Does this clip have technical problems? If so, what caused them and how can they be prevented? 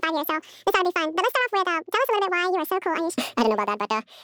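Yes. The speech is audio read two samples at a time (double speed) throughout: a reader taking pairs of samples as one frame plays it twice as fast and 12 semitones higher. A spectrogram shows formants stretched upward; the waveform looks compressed in time. Matching the declared channel count and sample width to the actual data prevents this.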